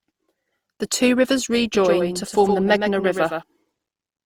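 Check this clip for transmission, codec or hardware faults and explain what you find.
Two faults are present. One runs through the whole clip, and one covers a stretch in the middle.

Generation loss runs from start to finish. The speech sounds swirly, hollow and smeared, and consonant attacks blur. It likely comes from repeated lossy coding, which fits about three passes through Opus near 48 kbit/s. Each pass requantises on a shifted frame grid, so the noise and spectral holes stack up.

A doubled audio track runs from 1.75 s to 3.43 s, starting right after "two rivers". A second full-band copy trails the original by about 100 ms and sits about 5 dB lower. It is dry, with no room decay. It starts and stops abruptly. A slower second capture path is the likely cause.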